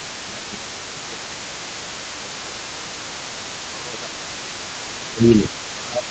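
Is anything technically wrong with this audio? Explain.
Yes, there are two problems in this speech clip, both tied to echo cancellation on a call.

Other side's voice leaking through: for the whole clip a second, fainter voice sits about 20 dB below the main talker. It is likely residual echo: the far end played on a loudspeaker, and the canceller did not fully subtract it from the microphone. On a spectrogram it shows as a weak, separate harmonic pattern running under the main speech; on the waveform it fills the gaps between phrases with low-level activity.

Speech suppressed in double talk: the talker's level repeatedly sinks, from 0.27 to 3.18 s by roughly 15 dB, then from 3.45 to 4.57 s and from 4.79 to 6.07 s by roughly 20 dB. The leaking far-end voice overlaps these stretches, so the canceller, likely unable to separate near talker from echo, turned everything down. The voice sounds ducked. 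The waveform envelope shrinks in these spans, and the spectrogram fades.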